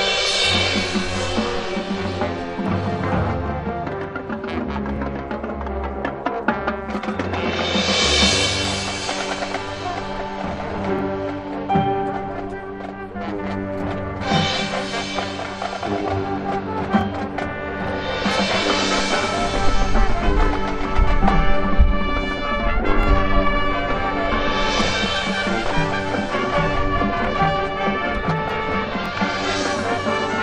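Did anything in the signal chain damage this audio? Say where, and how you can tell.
Yes. At the buffer or chunk-processing stage, overlapping chunks cause brief stutters at 4.96, 10.99, 17.01, 23.03 and 29.06 s, about every 6 s. Each new 6.0 s chunk begins 23 ms before the previous one ended, so that sliver plays twice at every join.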